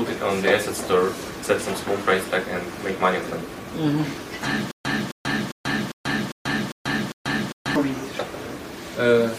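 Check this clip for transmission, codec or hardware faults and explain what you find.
One fault stands out, a stutter with silent gaps running from 4.71 to 7.76 s. The same 265 ms burst of sound plays seven times, each followed by about 136 ms of dead silence, so it repeats every 401 ms at a steady pace. The likely cause is a stalled player or stream replaying its last buffered fragment on each retry before running empty, and the audio that should have filled that span is lost. On a waveform this appears as identical blocks separated by flat silent gaps. A spectrogram shows the same pattern repeating, broken by fully blank vertical bands.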